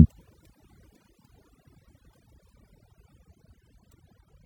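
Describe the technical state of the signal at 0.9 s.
At 0.9 s you're hearing overdone noise removal, and it runs through the whole clip. The reducer was pushed so hard it's shutting off individual frequency bands near its noise estimate, taking quiet bits of speech along, so the background twinkles over near silence.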